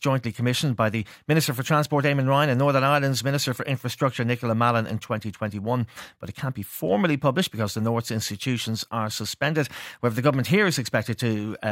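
No technical faults are audible.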